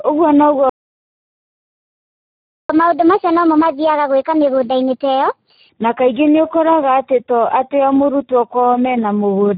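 Speex codec damage runs through the whole speech clip: heavy CELP coding leaves the voice hoarse and buzzy, a sound that points to roughly 8 kbps. A playback stall from 0.70 to 2.70 s cuts the audio to silence for 2 seconds, likely because the player's buffer ran dry. Catch-up at higher speed follows from 2.70 to 5.69 s, as the backlog is resampled at 1.25 times normal, raising tempo and pitch by about four semitones.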